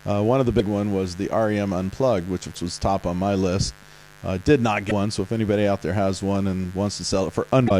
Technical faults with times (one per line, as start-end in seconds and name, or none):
0.00-7.79 mains buzz
0.56-0.61 damaged data in a compressed stream
2.52-2.57 damaged data in a compressed stream
4.87-4.92 damaged data in a compressed stream
7.67-7.71 damaged data in a compressed stream